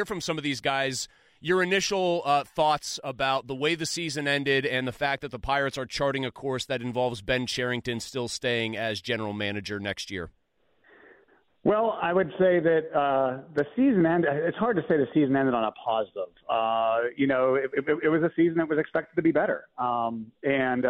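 At 13.28 s the adaptive stream drops to a lower bitrate and stays there to the end, the sudden loss of detail fitting a switch from roughly 96 to 48 kbit/s AAC. Artefacts thicken with no gap. The waveform stays continuous.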